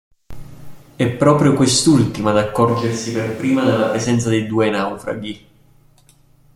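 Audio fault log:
2.70–4.03 s, switch to a distant microphone: the voice abruptly turns roomy and hollow with thinner bass, and room noise sits roughly 30 dB below the speech, while loudness stays about the same. The close microphone likely dropped out, leaving a farther one to pick up the room.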